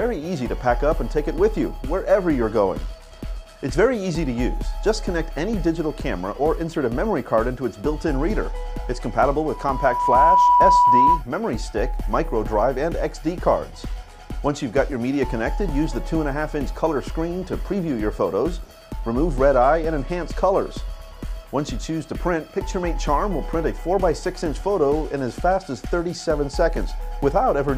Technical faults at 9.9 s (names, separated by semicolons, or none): loudspeaker feedback squeal